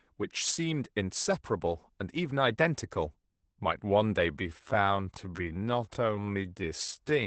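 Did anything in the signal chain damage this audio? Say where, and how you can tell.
Yes. Codec stage: the whole clip carries Opus voice compression. Nothing is present above 8.8 kHz, the hoarse, slightly robotic texture of the speech comes from the excitation being coded coarsely, and the damage is plainly audible. All of this fits the SILK linear-prediction coder in wideband mode at a low rate, around 12 kbps. A plain low-pass filter or a converter with a low sample rate would cut the top just as cleanly, but it would not add that buzzy, vocoded roughness.

From 4.27 s to the end there is a time-stretched section. The pace suddenly drops to about 0.63 of its earlier speed while the pitch stays where it was. The cause is likely software that lengthened the passage by repeating short pieces so it would fill a set duration. This is what separates it from a sample-rate or playback-speed mismatch, which would lower the pitch along with the tempo.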